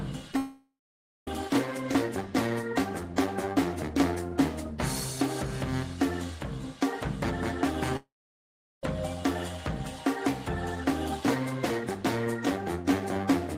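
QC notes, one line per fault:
0.32 s and 0.34 s, short concealed packet loss. Two brief holes fall back to back, about 10 ms of audio missing each. The receiver patched them by extending the last sound from its pitch or as shaped noise, then blended back. So the start of the clip gets a small smear or wobble, and a tiny sliver may vanish.
0.37 to 1.28 s, long network dropout. About 0.9 s of audio never plays. The sound stretches on as a fading buzz or hiss, then falls to silence for roughly 0.56 s. This is likely a long gap in arriving packets. Audio resumes with that stretch simply gone.
7.97 to 8.84 s, long network dropout. About 0.86 s is lost. The fill fades quickly, leaving about 0.76 s of silence. The cause is likely a similar network gap. Playback then picks up again further on, skipping what was lost.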